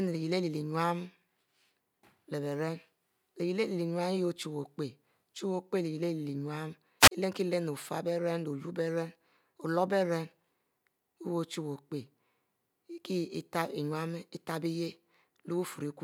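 Wireless microphone squelch dropout at 7.00–7.11 s: the radio link fades, static rises, and the receiver's squelch mutes the speech for 37 ms before it returns.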